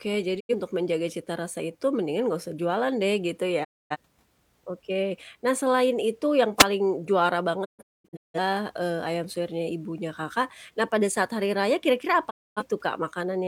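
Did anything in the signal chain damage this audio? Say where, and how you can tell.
Yes. There are digital broadcast dropouts at 0.39–0.55 s, 3.63–3.96 s, 7.64–8.39 s (several scattered holes, longest about 213 ms) and 12.29–12.62 s. Each has a quick 20 ms fade to silence. That's the receiver muting on failed frames, with gaps consistent with roughly 43 ms frames.

There's also a wireless microphone noise hit at 6.57–6.65 s, a brief swish of static over the speech. That comes from the analogue FM radio link at the very front of the chain: reflections cancelled the signal, and receiver noise briefly surged up through it.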